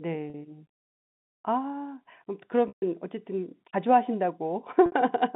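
Packet loss with pitch repetition occurs at 0.30 s (40 ms), 2.68 s (140 ms) and 4.86 s (60 ms). The receiver loops the last pitch period, so the short gaps sound buzzy and held, while the longest fades toward silence. A spectrogram shows flat, frozen harmonic stripes, and the waveform shows identical repeating cycles.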